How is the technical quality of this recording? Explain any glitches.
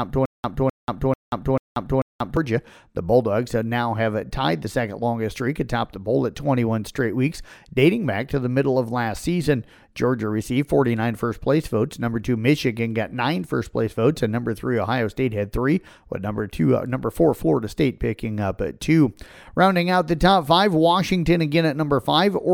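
The recording has one clear glitch: a stutter with silent gaps, already under way when the clip begins and lasting until 2.37 s. A 0.26 s burst of speech repeats five times, each followed by 0.19 s of digital silence, giving an even 0.44 s cycle. The likely cause is a stalled stream replaying its last fragment on every retry, so the audio due in that span is lost. On a waveform, identical blocks alternate with dead-flat lines. A spectrogram shows the same pattern stamped repeatedly, split by blank vertical bands.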